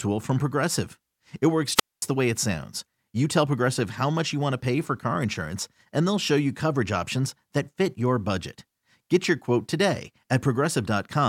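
At 1.75 s a short burst of hiss swells and collapses into near silence lasting about 230 ms, with the speech returning at 2.03 s on "the way it sounds". It is a wireless microphone squelch dropout: the FM radio signal faded until the receiver's squelch muted the output.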